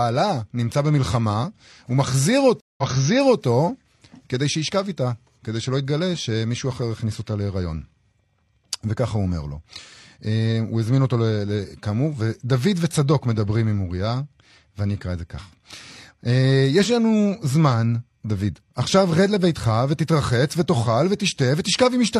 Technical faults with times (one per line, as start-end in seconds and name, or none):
2.60-3.43 stream reconnect